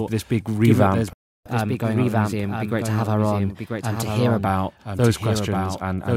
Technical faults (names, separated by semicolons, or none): doubled audio track; playback stall; catch-up at higher speed